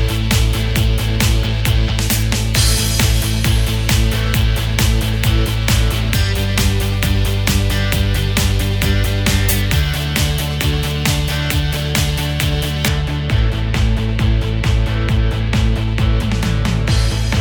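The audio runs cleanly up to 12.88 s. From there to the end at 17.41 s, de-emphasis applied wrongly takes hold. The top end rolls off in a smooth, steady slope. At 10 kHz it sits about 14 dB below the level at 1 kHz. The result is a dull, muffled sound. A treble cut meant to reverse pre-emphasis has been applied where none existed, or applied a second time.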